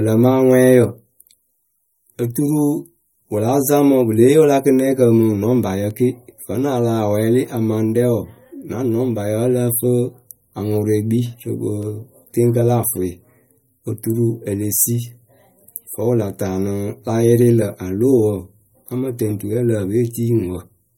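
From start to finish the speech carries plainly audible damage consistent with MP3 compression, likely from encoding at a low rate, which fits a bitrate around 48 kbps. Starved of bits, the encoder removes everything above 16.6 kHz. It also discards quieter spectral detail that its hearing model ranks as unimportant, so the remaining sound is thinner and less stable than the original.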